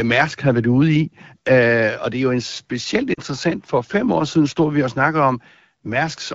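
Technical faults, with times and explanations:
3.14–3.20 s, lost AMR speech frames: just after "er jo en specielt" the speech briefly smears and dips, a gap of about 40 ms that fits two consecutive 20 ms frames failing their checksum. The AMR-WB decoder, running at 12.65 kbit/s with clear wideband speech on either side, fills the gap by repeating the last good pitch and vocal tract settings at falling gain. This produces a short drop toward near silence within the two frames before the voice returns weak or rough for a moment.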